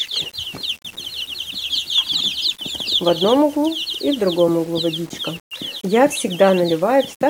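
Grainy distortion that follows the sound runs throughout, likely low bit depth without dither, consistent with 7-bit rounding. The waveform shows stairsteps, and the spectrogram shows a haze that tracks the sound, roughly 25 dB down.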